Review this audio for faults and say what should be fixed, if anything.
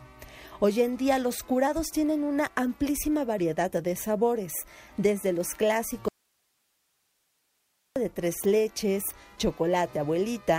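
At 6.09 s the sound cuts out abruptly and returns just as suddenly at 7.96 s, leaving about 1.87 s in which only a faint bed of hiss remains, roughly 45 dB below the normal level. This is an audio dropout to a faint residue: the wanted signal was lost upstream while the path after the break stayed live and kept passing its own noise floor. The likely cause is an intermittent connection or a momentary source interruption. To prevent it, secure and check cabling and source connections, and monitor the feed so any interruption is caught and re-recorded.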